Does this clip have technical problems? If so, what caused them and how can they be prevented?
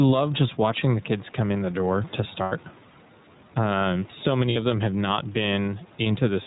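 Yes. The background swells by around 5 dB in each pause and ducks under every loud syllable, which is gain pumping, likely from input gain set far too high with a fast limiter reining it in. On a waveform, the noise floor visibly rises between phrases and peaks look flattened to a similar height; a spectrogram shows the low-level noise band brightening in the gaps. Lowering the microphone gain so the limiter rarely engages prevents it.

The whole clip carries the iLBC codec's narrowband sound, with 30 ms frames and a rough, slightly synthetic edge that fits its 13 kbps mode. A spectrogram shows everything above 4 kHz cut off flat, with grainy, smeared harmonics below. Using a wideband codec such as Opus avoids this band limit and roughness.

Lost iLBC frames appear twice, from 2.43 to 2.52 s (90 ms, which fits three frames) and from 4.50 to 4.57 s (60 ms, about two frames). In each gap, the decoder repeats the last pitch cycle mixed with noise, producing a held, buzzy vowel, and the voice recovers immediately afterward. 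On a spectrogram these look like frozen, evenly repeating harmonic stripes, and on the waveform like similar repeated cycles with added noise. A jitter buffer, packet redundancy or forward error correction, and a more stable network prevent these gaps.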